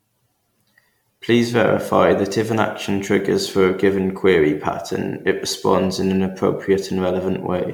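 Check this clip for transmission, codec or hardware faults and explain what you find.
One codec fault runs through the whole of the speech: generation loss.

Throughout the clip the speech sounds swirly and hollow, with a smeared, watery texture and consonant attacks that blur instead of snapping. Above 19.9 kHz there is nothing. The likely cause is repeated lossy coding, with the audio decoded and re-encoded around ten times through MP3 at what sounds like 128 kbit/s. Each pass quantises on a shifted frame grid, so noise and spectral holes pile up beyond what one encode would leave.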